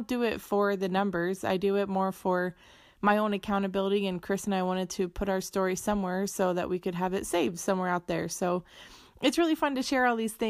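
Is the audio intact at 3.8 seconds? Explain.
Yes, the audio is intact at 3.8 seconds, with no audible fault at that moment.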